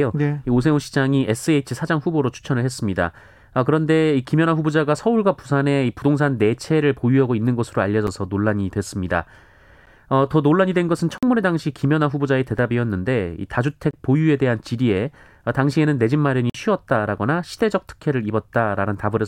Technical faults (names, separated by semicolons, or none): block of digital silence